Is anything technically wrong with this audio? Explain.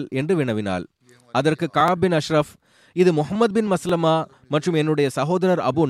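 Yes. Overlapping chunks: the speech was handled in one-second blocks, each starting about 6.5 ms before the previous one ended, so that sliver plays twice at every join. This gives a brief click or stutter at 0.88, 1.88, 2.89 and 3.89 s.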